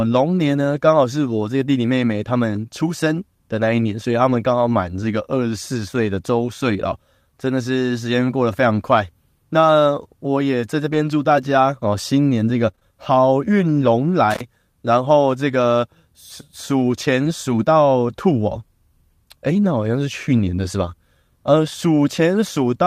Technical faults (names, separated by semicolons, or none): lost packet rebuilt from error correction; scattered short gaps; intermittent contact